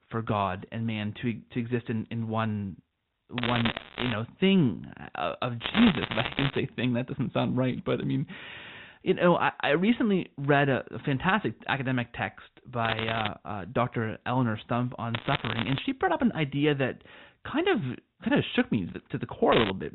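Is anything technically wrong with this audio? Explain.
Yes. The speech has bit errors on a digital phone line, in five bursts: 3.38 to 4.14 s, 5.62 to 6.57 s, 12.85 to 13.28 s, 15.14 to 15.82 s, and 19.52 to 19.70 s. Bits flipped in the 8-bit telephone stream, roughly 0.7 to 2 in every hundred. Each flip corrupts one sample. Hits on the sign or top bits produce sharp ticks. These bursts sound like crackle laid over the 4 kHz-limited telephone speech.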